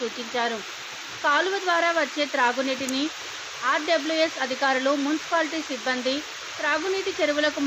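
At 2.89 s there's a sharp little snap sitting on top of the sound, over in a few milliseconds and peaking fairly hot, around -10 dBFS. That's an electrical switching spike, likely a nearby switch or static arc jumping onto the audio line.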